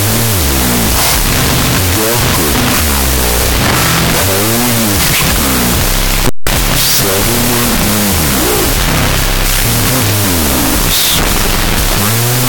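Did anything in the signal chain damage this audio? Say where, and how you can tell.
Yes, a wrong sample width at the sample-format conversion stage, heard throughout: 16-bit integer data read as unsigned 8-bit. Each byte becomes a sample, so the sound plays at half speed, an octave low, under loud noise. A byte-order swap would keep the original speed.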